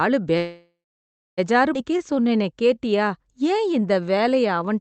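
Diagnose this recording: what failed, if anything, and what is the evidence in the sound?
Network and jitter buffer stage: a call audio freeze. At 0.37 s the speech stops being new. The last sound carries on as a fading buzz or hiss, then goes silent for roughly 0.64 s. Real speech returns at 1.40 s, picking up where it left off. About 1 s of gap has been inserted and nothing appears lost. The likely cause is packets held up in transit while the jitter buffer ran dry and concealment filled in.

Jitter buffer stage: a skip ahead. Between 1.74 and 1.76 s the speech jumps forward with almost no gap. About 0.7 s of speech is missing. The two sides are butted together directly. This follows the freeze. The delayed packets had piled up, so the buffer held far more than its target. It discarded a stretch of queued audio to cut the delay back down. That removes roughly 0.7 s of the 1 s added earlier.

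Jitter buffer stage: a jitter buffer slow-down. From 1.91 to 4.73 s the speech runs at about 90% speed, with pitch unchanged. Sounds are drawn out. About 287 ms is added in total. The buffer was low after the drop and was rebuilding its reserve. It did this by repeating single pitch periods and pieces of pauses many times over. The Opus codec's 8 kHz band limit is present throughout.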